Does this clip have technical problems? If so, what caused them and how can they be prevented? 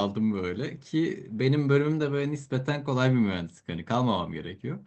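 No technical problems here.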